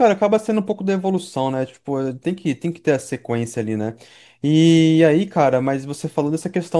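No technical faults can be heard in the speech at any point, with the signal holding steady throughout.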